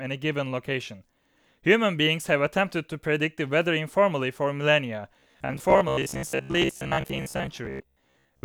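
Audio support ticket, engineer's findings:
Robotic sound from repeated short buffers, 5.20 s to end (8.44 s). Speech turns into a rigid metallic buzz fixed at 66.8 Hz, with about half the audio replayed. Likely a late-arriving stream forcing roughly 15 ms repeats. The buzz pitch stays fixed, unlike codec warble.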